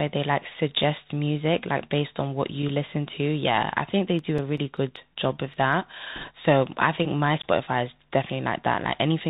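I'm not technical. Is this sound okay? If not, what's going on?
No. All the way through, the speech sounds thin and muffled, like a phone call on a cheap headset, with a grainy hiss underneath and scratchy s sounds. This is the Bluetooth CVSD headset codec, the basic format wireless headsets use for calls. It throws away everything above about 4 kHz, which removes the crispness, and it stumbles on sharp, bright sounds, leaving them rough and gritty.

Between about 4.19 and 5.73 seconds there are nine small, regular ticks. These are CD scratch ticks. A scratch or mark on a disc spoils a patch of data too damaged for the player to repair. It hits the same spot once per turn of the disc, so the player patches or silences a few milliseconds each time, giving a steady ticking.

Around 6.16 to 6.30 seconds there is a short burst of rushing, crackly noise over the speech, with no loud clicks. These are bit errors on a Bluetooth voice link. 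Flipped bits on the wireless connection corrupted a small share of the data, roughly one piece in a hundred, for that instant. Each error does only a little damage and fades quickly, so it sounds like a brief wash of crackle rather than a pop.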